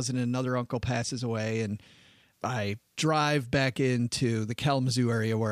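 Nothing technically wrong turns up anywhere in this short bit of speech, so there's nothing to time or trace back to a cause.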